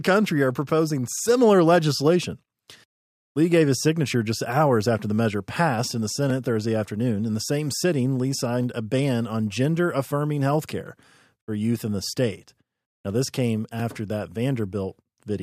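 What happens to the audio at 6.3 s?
At 6.30 s there is a block of digital silence lasting 0.67 ms, consistent with a 32-sample buffer being output as zeros, most likely because it was not filled in time. The signal cuts out to silence and returns with no fade, so each edge is a hard discontinuity. With a hole this short, the two edges merge into a single tick or dip rather than an audible gap in the speech.

The moment also falls inside a run of clock drift buffer slips that starts at 1.89 s, just after "are proposing similar", and continues to 15.34 s. The two converters most likely run on separate clocks that differ by roughly 70 ppm, so the buffer between them slowly creeps until a few samples are dropped or repeated. This gives about seven regular clicks, one every 2.24 s, heard wherever speech is present.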